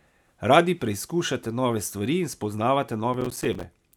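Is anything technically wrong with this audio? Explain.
Yes. From 3.14 to 3.66 s the speech is overlaid with processor overload crackle. The system could not fill its audio buffers on time, so it missed about fifteen of them in that half-second stretch. Each missed buffer, roughly 5 ms long, went out as silence with hard edges, and together these come across as a gritty, tearing crackle. On a waveform the signal shows brief dropouts to silence. A spectrogram shows broadband vertical clicks at each edge.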